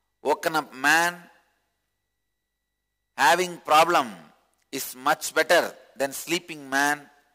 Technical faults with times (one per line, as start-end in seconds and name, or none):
0.00-7.34 sample clock jitter